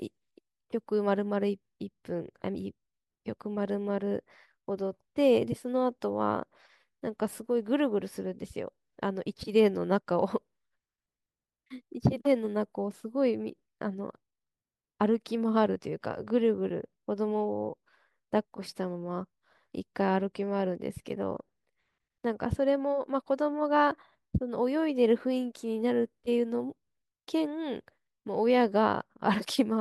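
No technical faults are audible at any point in the speech recording.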